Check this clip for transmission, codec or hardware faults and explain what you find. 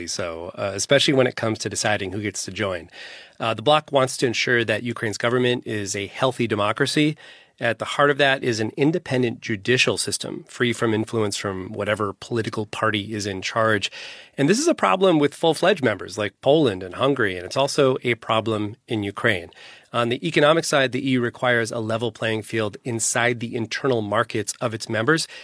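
Nothing stood out on listening to this speech clip, and there is no fault to report.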